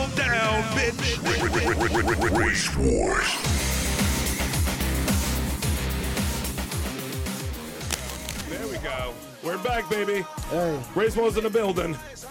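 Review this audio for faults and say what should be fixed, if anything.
From 7.81 to 8.43 s, a burst of cable scratch noise sits over the sound. It lasts about 0.6 s. It is a dense, ragged rustle, only around 10 dB below the signal, so it is clearly audible. The likely cause is a worn cable, plug or control being moved. Its contact resistance jumps about rapidly, and those jumps reach the signal as noise. Replace or clean the suspect lead and connectors, and keep cables still while recording.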